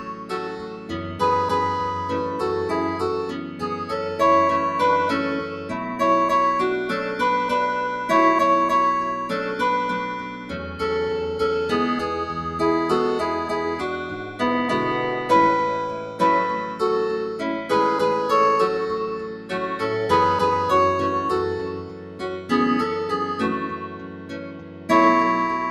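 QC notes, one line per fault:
Throughout: noise suppressor applied to music or sounds. A speech-oriented suppressor stays active across the clip. It treats sustained tones and decays as noise. Level swings by around 10 dB, so the sound pumps and thins while sharp onsets pass.
0.0–1.21 s, 3.27–3.91 s, 5.42–5.96 s, 10.2–10.81 s, 14.05–14.41 s, 16.02–19.52 s, 21.61–24.9 s: sound cut by the noise suppressor. Held and fading material sinks by up to about 10 dB. Dips last roughly half a second to two seconds. Tails end early.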